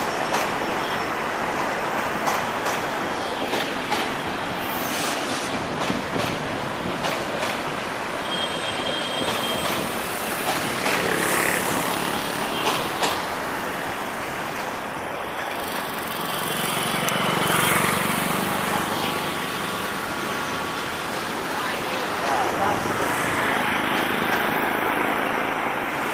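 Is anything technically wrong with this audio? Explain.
No, nothing technically wrong stood out on listening to this audio.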